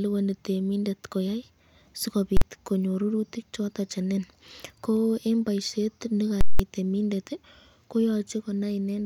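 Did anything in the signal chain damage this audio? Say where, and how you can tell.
Yes. At 2.37 s the speech is hit by a hard bang lasting about 46 ms, and just after "nin ko en boishet" a second one runs from 6.41 to 6.60 s: a loud pop at each edge with nothing between. These are invalid numbers at full scale, from the processing and sample-format conversion stage. A calculation produced infinite or invalid values that were clamped to the maximum level for whole blocks, which fits blocks of 2048 and 8192 samples.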